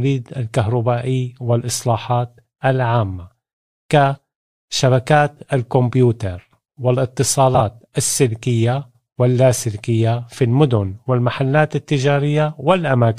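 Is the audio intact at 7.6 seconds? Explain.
No. From 7.54 to 7.60 s the speech has frames out of order. Two neighbouring blocks, which fits single frames of about 26 ms, were decoded swapped. That brief stretch plays halves exchanged, giving a garbled flutter. No time is lost.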